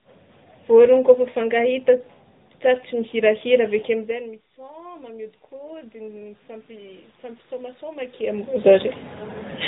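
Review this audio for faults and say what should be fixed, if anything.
AMR narrowband mobile codec damage runs through the whole clip. The speech is cut off with nothing above 3.8 kHz and sounds plainly buzzy and synthetic, because a pulse-driven vocal-tract model at 8 kHz sampling rebuilds it. The level of damage fits a mid-rate mode near 10.2 kbps. On a spectrogram, all energy stops at a hard flat ceiling around 3.8 kHz, and the harmonics look smeared. To prevent it, carry the call over a wideband codec such as AMR-WB or Opus instead.

Automatic gain rising runs from 3.88 to 8.58 s. When the talker moves away around 4 s, the input drops by about 22 dB. The gain control then climbs slowly by about 14 dB, so speech and room noise swell together. On the waveform, the envelope and the noise floor in the pauses creep upward over those seconds, and a spectrogram shows the background band brightening. 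To prevent it, use a slower AGC with a capped maximum gain, and keep the talker at a steady distance from the microphone.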